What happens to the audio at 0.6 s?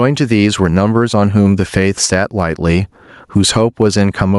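At 0.6 s you're hearing gain pumping, which runs through the whole speech clip. The level is likely cranked far too high into a fast limiter that clamps down on each loud syllable, so the gain keeps swinging around 15 dB and the speech sounds squashed.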